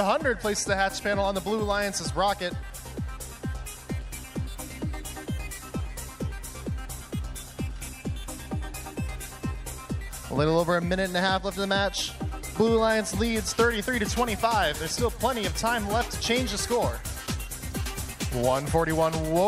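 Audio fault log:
No audible faults were found anywhere in this recording.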